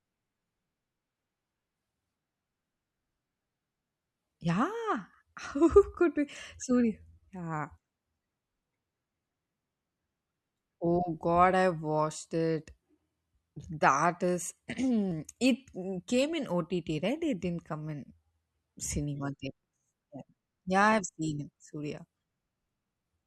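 Audio missing between chunks at 5.14 s and 15.12 s in this speech clip: each time, about 20 ms of speech drops out and the two sides butt together with no gap, 10 s apart. The likely cause is a recorder losing audio while closing one 10-second chunk and opening the next.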